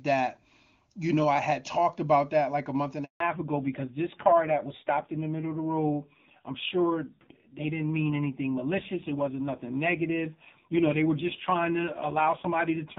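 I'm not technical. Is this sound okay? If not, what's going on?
No. At 3.04 seconds there is a handover gap. The call switched networks, and the voice cuts out for 0.16 seconds, until 3.20 seconds.

Then comes a fallback to narrowband. From 3.20 seconds to the end, the call uses an older, simpler phone format. Nothing above 4 kHz gets through, so the voice sounds duller and rougher.

Before the switch, the HD Voice format (AMR wideband) sounds clear.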